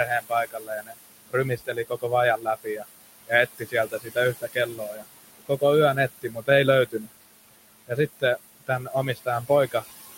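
Noise suppressor artifacts run through the whole recording. The suppressor pulls steady noise down by about 18 dB, frame by frame. The room noise, about 11 dB under the speech, sinks in the gaps and swells beneath speech.

Speech cut by the noise suppressor comes from 0.05 to 7.1 s, dipping up to about 21 dB, roughly two seconds in all. It returns from 7.88 to 9.85 s, up to about 19 dB, near 0.4 seconds. The suppressor mistakes soft speech for noise. Consonants and endings sound swallowed.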